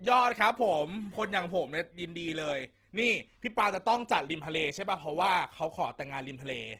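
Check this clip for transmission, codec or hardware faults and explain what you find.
One codec fault runs through the whole clip: Opus compression damage, plainly audible from start to finish. The speech sounds rough and grainy rather than swirly, which points to the likely cause: Opus in its music-oriented CELT mode at a low rate, around 16 kbps. Bandwidth stays full, reaching about 20.2 kHz. With so few bits, the encoder keeps each band's energy but refills fine detail with folded copies or noise, turning tonal parts coarse.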